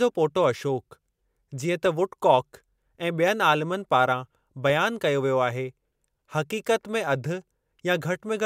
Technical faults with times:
0.44-7.54 clock drift buffer slips

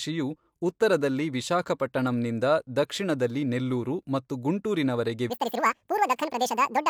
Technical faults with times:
5.30-6.89 section at the wrong speed

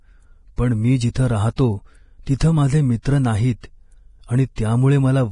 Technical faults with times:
0.00-5.32 Vorbis compression
0.23-5.20 clock slip clicks

